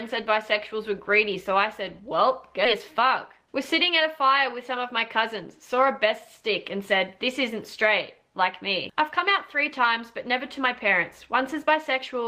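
A skip ahead at 2.65 s drops roughly 0.7 s of audio, joined with no gap, unlike a dropout, which leaves silence or fill. Then a jitter buffer speed-up from 2.78 to 4.06 s runs about 8% fast at unchanged pitch, unlike resampling, as small pitch-period slices totalling roughly 0.1 s are trimmed.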